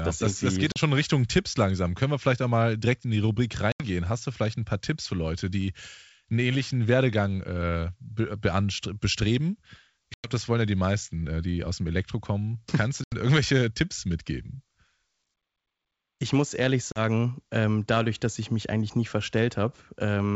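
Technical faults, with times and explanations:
0.72–0.78 s, 3.72–3.85 s, 10.14–10.31 s, 13.04–13.15 s and 16.92–17.00 s: packet loss on an ADPCM call. There are sharp holes of 40 to 100 ms of dead silence, each a few packets' worth. The first comes right after "das das geht", and the last falls between "muss ehrlich" and "ähm dadurch dass ich". After each gap, the G.722 decoder's predictor and step size are out of sync with the sender's, so the sound comes back with some roughness before settling.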